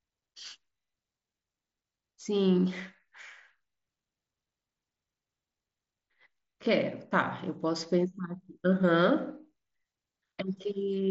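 Nothing in this speech recording stood out on listening.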